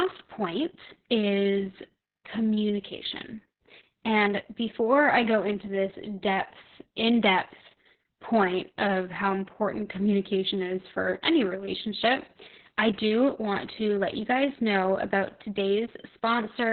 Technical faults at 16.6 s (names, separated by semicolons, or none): Opus voice compression